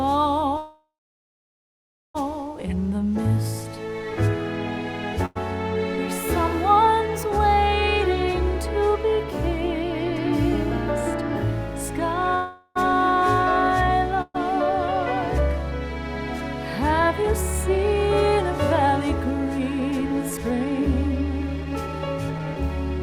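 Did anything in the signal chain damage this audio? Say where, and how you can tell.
Yes. The damage sits in the network and jitter-buffer stage of a call path.

Call audio freeze at 0.57–2.16 s and 12.35–12.77 s. The sound stops, is held as a fading tail, then resumes exactly where it left off. The first freeze includes about 1.27 s of near-silence. The likely cause is delayed packets draining the jitter buffer, adding 1.57 s and 0.41 s of delay.

Short stall from a late packet at 5.26–5.37 s. One packet missed its playout slot, so the receiver stretched the preceding sound for about 99 ms, leaving a held, slightly buzzy smear. Playback then continued from the same point with nothing lost.

Burst of packet loss at 14.21–14.36 s. The receiver bridged a run of lost or too-late packets with about 127 ms of decaying concealment. The audio then jumped ahead, skipping roughly 540 ms of material. 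That jump shows the gap was concealed, not delayed.

Jitter buffer speed-up at 16.99–20.81 s and 21.61–22.56 s. After the earlier delays, the buffer held too much audio. It trimmed pitch-period slices repeatedly, so playback runs at 109% and then 121% speed at unchanged pitch. Around 0.4 s and 0.2 s were removed, and the sound comes across as hurried.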